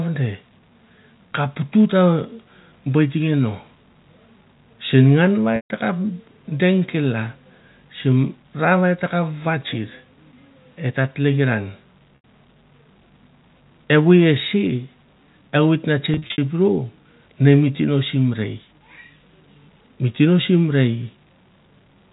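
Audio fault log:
5.56–5.70 s, 12.16–12.21 s, 16.14–16.38 s, packet loss with pitch repetition: after "sen ngan va" and "et ta tlekiran" the sound briefly hangs on a held, buzzy tone. The last pitch period was repeated to cover lost stretches of 140 ms, 80 ms and 170 ms, the last scattered in runs up to 60 ms.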